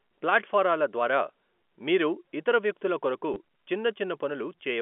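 At 3.34 to 3.36 s, just after "మీరు ఇతర వ్యక్తుల కొరకు", a brief robotic stutter breaks into the speech. This is packet loss with the last packet repeated: about 20 ms went missing, consistent with two 10 ms packets, and the receiver replayed stale audio across the telephone-band G.711 line.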